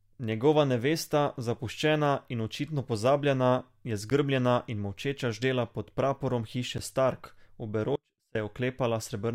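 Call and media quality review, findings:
Block of digital silence at 4.10 s, after "in očitno pozabljena je", and at 6.78 s, after "molčeča ždela pod praporom". About 11.6 ms of silence, short enough to be heard as a tick or dip, consistent with a 512-sample output buffer not being filled in time.

Audio dropout to a faint residue from 7.96 to 8.35 s, roughly 0.39 s. Speech cuts out abruptly, leaving only faint sound roughly 35 dB below the signal, likely from the signal being lost upstream while the downstream path stayed live.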